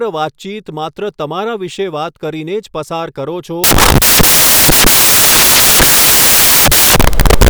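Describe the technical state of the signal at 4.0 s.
At 4.0 s the signal is corrupted by samples built from the wrong bytes, running from 3.64 s to the end at 7.49 s. Each sample's bytes are misassembled, so the rapidly changing low bits become the dominant part of each value, producing loud, harsh broadband noise.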